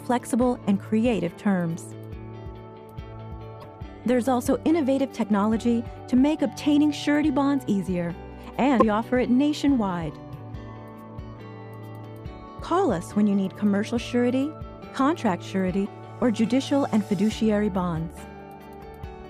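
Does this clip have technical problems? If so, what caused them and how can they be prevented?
Yes. There are three short bursts of damaged data in a compressed stream, at 3.59–3.65 s, 8.77–8.82 s and 15.82–15.87 s, each about 55 ms long. Corrupted bytes in the encoded file made the decoder misread those frames and lose sync until it found the next valid frame header, so each one comes out as a brief chirp, squawk, click or short hole. A plain dropout would go silent instead. Checksummed transfer and storage would keep the encoded data intact.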